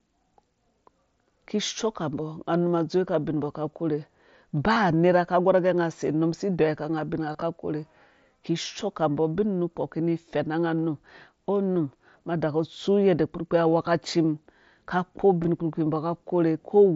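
Speech carried over a wideband mSBC headset link shows concealed Bluetooth headset packet loss at 4.74–4.76 s before "nerha ka gorh agɛ", 7.33–7.42 s, 11.75 s before "ma daku", and 15.43 s. Lost packets are filled with repeated recent waveform, producing brief buzzy patches.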